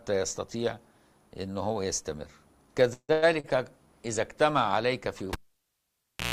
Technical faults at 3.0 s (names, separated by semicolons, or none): call audio freeze